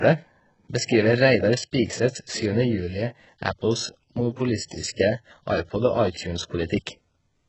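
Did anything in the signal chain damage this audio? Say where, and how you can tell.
Yes, and it's at the codec stage, across the whole speech clip. The top end stops dead at 8 kHz, and what sits just below that sounds bright but synthetic: the s sounds come out gritty and lisping, with a metallic sheen that doesn't track the lower harmonics. That's likely HE-AAC compression at a very low bitrate, which fits something around 8 kbps. The treble is rebuilt by copying lower bands upward under a coarse envelope, and here the damage is heavy.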